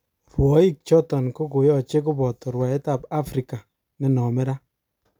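No technical faults can be heard.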